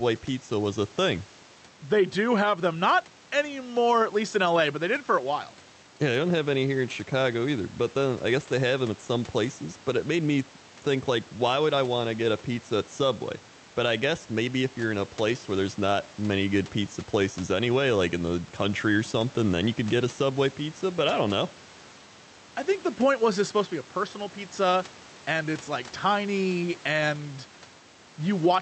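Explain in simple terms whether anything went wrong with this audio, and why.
There's gain pumping through the whole speech clip. Loud and soft parts end up closer in level, so everything sounds squashed. That's likely a fast limiter pulling down a microphone level set too high.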